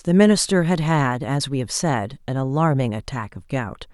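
No technical faults are audible.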